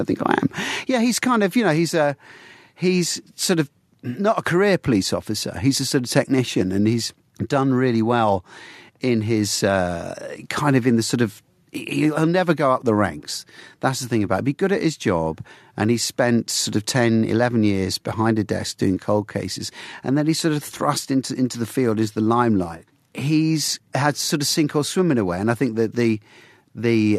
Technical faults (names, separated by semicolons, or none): none